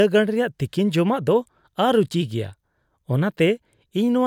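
Nothing in the speech stood out as a technical problem on listening.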